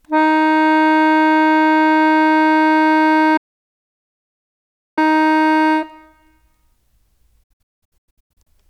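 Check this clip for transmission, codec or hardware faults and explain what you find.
The music has two digital broadcast dropouts. From 3.37 to 4.98 s the receiver loses valid frames and mutes, with an 8 ms fade, for about 1.6 s. From 7.43 to 8.50 s the muting is scattered into short holes, the longest 192 ms, totalling about 0.7 s. On a waveform and spectrogram these show as flat, empty gaps, with the music resuming further along.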